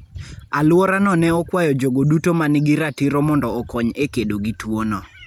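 Speech recording with no audible technical faults.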